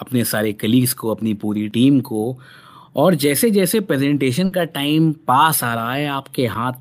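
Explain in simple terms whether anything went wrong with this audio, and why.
Around 4.45 s, a short burst of packet loss hit: a run of audio data never arrived in time. The receiver filled about 60 ms by stretching the last sound and fading it, then jumped ahead at 4.54 s, so a brief slice of speech is simply gone.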